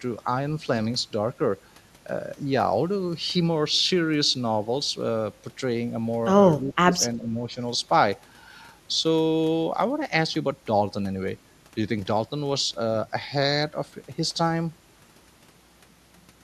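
An echo canceller likely mistook near-end speech for loudspeaker echo during double talk and turned it down. The speech dips sharply, by around 15 dB, from 6.65 to 7.0 s, then more gently, by around 5 dB, from 7.16 to 7.5 s.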